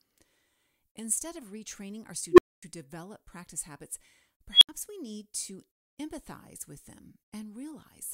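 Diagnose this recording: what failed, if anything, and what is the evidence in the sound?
An unstable filter in call processing: after "of retraining our" (2.32 s) a tone near 400 Hz swells over 64 ms, then 245 ms of silence; near 3 kHz at 4.51 s, 75 ms silence. Unlike acoustic feedback, each squeal ends in abrupt silence as overflow resets the filter.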